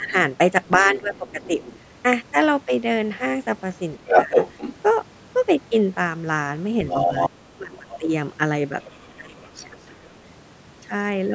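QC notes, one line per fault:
0.0–1.59 s, 4.13–4.36 s, 7.06–10.04 s, speech suppressed in double talk: the talker dips by about 10 dB, and by about 25 dB late on, while a second voice overlaps, likely from an echo canceller ducking both.
0.96–1.76 s, 4.06–4.75 s, 6.89–10.15 s, other side's voice leaking through: a separate voice is faint at first, louder than the talker near 4.1 s, then just under it, likely residual loudspeaker echo.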